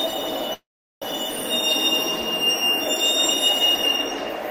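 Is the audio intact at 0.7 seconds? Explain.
No, a call audio freeze runs from 0.53 to 1.04 s: likely delayed packets emptied the jitter buffer, so the last sound fades to about 0.4 s of silence, then resumes with nothing lost.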